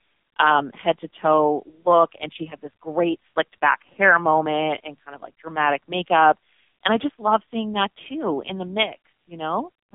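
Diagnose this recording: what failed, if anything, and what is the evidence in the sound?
The codec stage is at fault: the whole clip has gone through the AMR narrowband mobile codec. Nothing comes through above 3.7 kHz, the band sits at roughly 250 Hz to 3.6 kHz, and the heavy buzzy, synthetic texture points to a low rate around 6 kbps.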